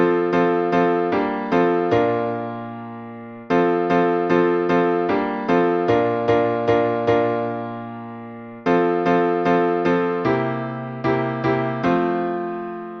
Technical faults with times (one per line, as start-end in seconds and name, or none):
none